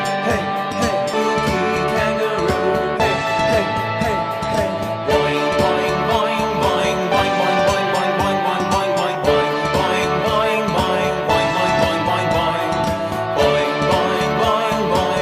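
A skip ahead at 1.13 s: roughly 0.4 s of audio was discarded, either lost in transit or dropped when an overfull jitter buffer caught up, and playback leaps forward to material already queued. The two sides butt together with no gap, so the sound jumps abruptly mid-flow.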